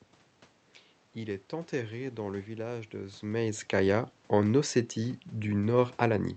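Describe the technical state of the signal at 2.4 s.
At 2.4 s the signal is intact: the speech passes through the Opus call path with its ordinary coding and the room noise in the background, with no dropout, glitch or other fault at that moment.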